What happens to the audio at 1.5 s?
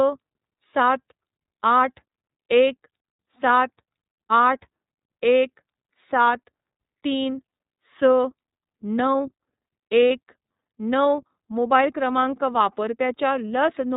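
At 1.5 s the speech sounds boxed-in and slightly rough, with a buzzy, synthetic edge and nothing above 4 kHz, and that quality runs through the whole clip rather than starting here. This is iLBC codec damage, and it is plainly audible. The narrowband coder rebuilds the excitation of each short frame independently of the last, which fits 30 ms frames at a low rate near 13 kbps, so fine detail is lost and the sound turns mechanical.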